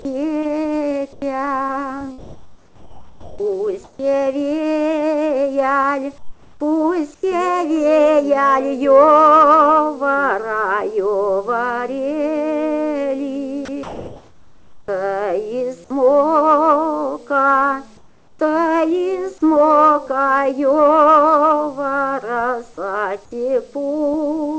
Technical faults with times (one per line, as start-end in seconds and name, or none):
0.02-0.05 sound dropped by the voice detector
1.13-1.22 comfort noise in place of the background
2.18-3.99 comfort noise in place of the background
6.18-6.60 comfort noise in place of the background
7.14-7.23 comfort noise in place of the background
13.65-13.68 sound dropped by the voice detector
13.65-14.88 comfort noise in place of the background
17.97-18.39 comfort noise in place of the background